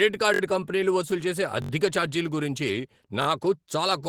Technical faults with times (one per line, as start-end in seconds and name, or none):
0.00-4.08 Opus voice compression
0.34-0.41 repeated buffer
1.62-1.71 repeated buffer
3.22-3.26 repeated buffer